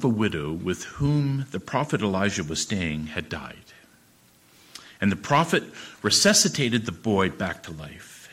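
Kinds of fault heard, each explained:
Hard clipping: Peaks exceed what a stage can pass, so they are cut flat. This adds harsh high harmonics. Clipping occurs at 5.32–5.54 s and 6.07–6.76 s, about 4 dB over. A brief crackle follows at 7.19–7.21 s, about 1 dB over.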